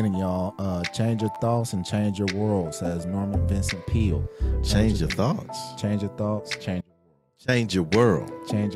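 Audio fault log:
1.35–1.37 s, repeated buffer: a brief buzzy stutter as one 11.6 ms slice sounds three times with hard joins, which fits a 512-sample buffer replayed when fresh audio arrived late.
6.81–7.48 s, audio dropout to a faint residue: the sound cuts out abruptly for 0.67 s, leaving only a faint sound about 30 dB down, likely the signal lost while the downstream path stayed live.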